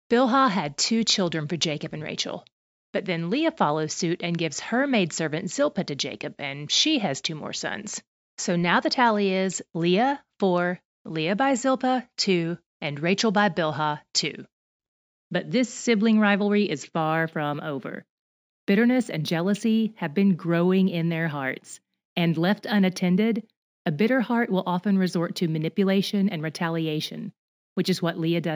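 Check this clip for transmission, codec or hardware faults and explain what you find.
There is one fault. From 17.01 s to the end there is imaging from linear upsampling. The straight-line interpolation suggests a 16 kHz source, and it leaves mirror images at 8–16 kHz, about 35 dB down, which add a metallic shimmer to sibilants.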